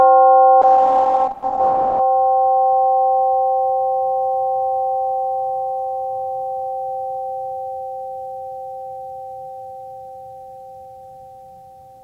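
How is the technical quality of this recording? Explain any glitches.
The music has one clear glitch near the start. From 0.63 to 2.07 s there's a call bitrate drop: the encoder fell from 128 to 9 kbps, so everything above 8 kHz vanishes and the music turns coarse and muffled.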